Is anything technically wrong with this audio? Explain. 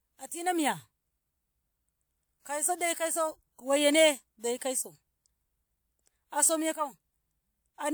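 Yes. There is a pre-echo from about 4.59 to 4.61 s in this speech recording. A transform codec spread its quantisation noise across a block in which a sharp attack arrived late, so noise scaled to the loud onset also filled the near-silent stretch just before it. The result is a brief hiss lasting about 28 ms ahead of the attack, and the onset itself sounds softened and smeared rather than crisp.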